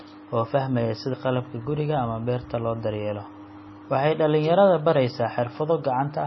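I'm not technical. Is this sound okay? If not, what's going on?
No. For the whole clip the speech sounds dull and watery, with a swirly, metallic edge on s sounds. Everything above about 5.9 kHz is missing. That points to heavy MP3 compression, most likely at a very low quality setting: the encoder discards the treble and drops faint detail that flickers in and out. A simple muffled recording would lose the treble too, but it wouldn't swirl or chirp like this.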